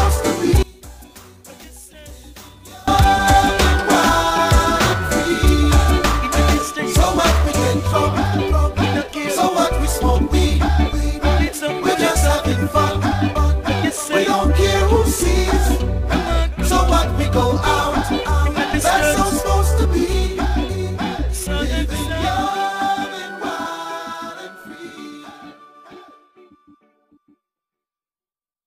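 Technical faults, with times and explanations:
0.63–2.88 s, one channel inverted: the sound drops by about 24 dB to a faint copy, then returns to full level. The likely cause is one stereo channel carrying reversed polarity during this stretch. When the two channels are summed to mono, everything they share cancels, including the centred material, leaving only the faint difference between left and right.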